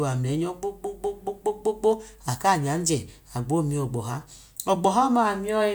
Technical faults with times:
none

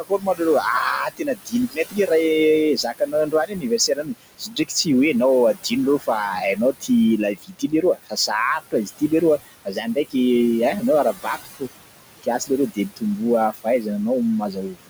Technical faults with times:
0.00-14.90 noise suppressor artifacts
0.00-0.41 speech cut by the noise suppressor
1.10-2.10 speech cut by the noise suppressor
2.76-4.87 speech cut by the noise suppressor
5.54-10.15 speech cut by the noise suppressor
10.80-11.63 speech cut by the noise suppressor
12.22-13.88 speech cut by the noise suppressor
14.41-14.90 speech cut by the noise suppressor

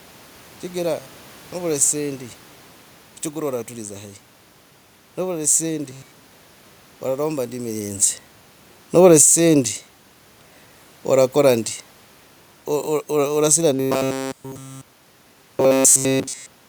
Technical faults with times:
1.00-1.52 robotic sound from repeated short buffers
5.91-6.52 robotic sound from repeated short buffers
8.91-11.75 automatic gain falling
9.28-9.71 automatic gain rising
13.75-16.68 robotic sound from repeated short buffers

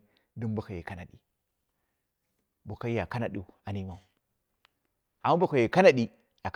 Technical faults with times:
none

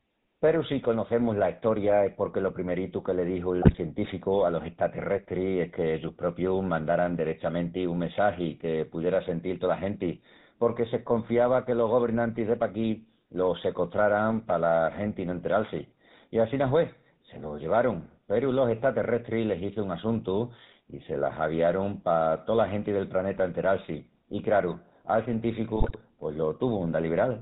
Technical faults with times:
0.00-27.42 GSM full-rate codec
3.62-3.79 GSM bit errors
25.76-26.03 GSM bit errors

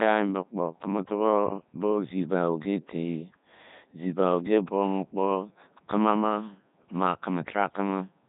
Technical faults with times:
0.00-8.29 Codec 2 vocoder

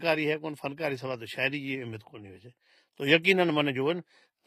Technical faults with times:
0.00-4.47 HE-AAC compression

